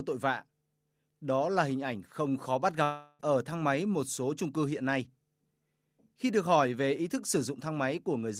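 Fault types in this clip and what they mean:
Long network dropout: at 2.83 to 3.21 s, right after "ảnh không khó bắt", the speech stops and the last sound is drawn out as a fading buzz for about 0.36 s, then a brief silence of about 10 ms before the audio resumes at "ở thang máy một". The cause is likely a run of lost packets: the receiver stretched what it last had to cover the gap, and roughly 0.36 s of speech never arrived and is simply gone.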